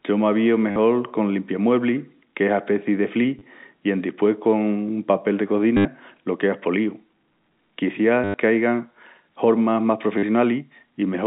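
At 0.71 to 0.76 s, 3.39 to 3.41 s (after "qu'es aspeci de", before "i pos"), 5.77 to 5.85 s (after "papel de", before "lo queas"), 8.24 to 8.34 s and 10.18 to 10.23 s (after "hormas más"), there is packet loss with the last packet repeated. Missing audio is filled by looping the previous short block, which fits 10 ms packets. The longer runs buzz at about 100 Hz with a robotic stutter. A plain dropout would go silent instead. The narrow telephone band from G.711 coding stays audible throughout.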